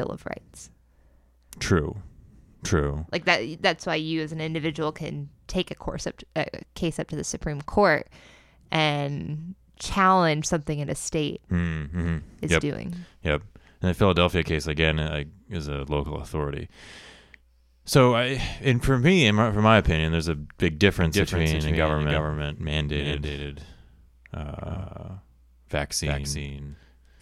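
A doubled audio track begins abruptly at 21.01 s, just after "opinion there's a big", and runs to the end: a second, undecayed copy of the speech trails by about 300 ms, roughly 5 dB quieter, likely from a slower parallel capture path.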